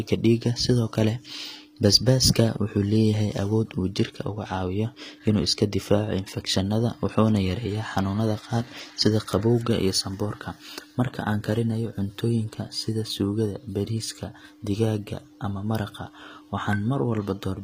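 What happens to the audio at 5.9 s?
At 5.9 s the speech has gritty, metallic treble, with s sounds turning lispy and nothing above 15.5 kHz. This runs through the whole clip. The likely cause is HE-AAC compression at a low bitrate, around 24 kbps: only the lower spectrum is coded, and the treble is rebuilt from copied lower bands whose harmonics don't align.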